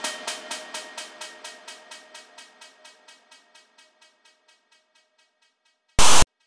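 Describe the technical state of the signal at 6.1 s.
At 6.1 s you're right in the middle of file tags played as audio, running from about 5.99 to 6.27 s. A block of text tag data got read by the player as if it were samples. The character bytes come out as a loud, harsh rasp pushed off to one side, and then the zero padding after the text drops to dead silence. It hits as a sudden static burst with hard edges.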